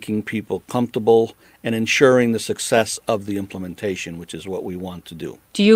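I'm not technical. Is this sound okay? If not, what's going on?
Yes, it sounds fine: nothing jumps out as wrong anywhere in this bit of speech, so there's nothing here you need to worry about.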